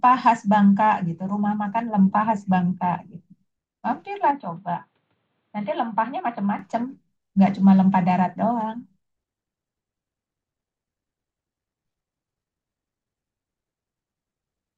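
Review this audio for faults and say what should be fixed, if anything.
From 4.31 s to 6.59 s the speech turns dull and boxy. Nothing is heard above 4.5 kHz. The level drops by roughly 5 dB, and a faint new background noise appears well below the speech. There is no gap at either switch point. At 6.59 s the full bandwidth returns. This likely points to an input switched to a poorer device. Pin the recording input to one device and disable automatic switching.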